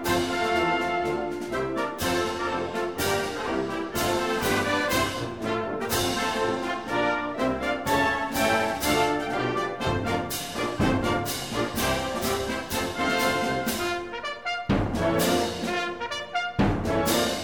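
Nothing here stands out as a technical fault; the audio runs along without any glitch worth pointing to.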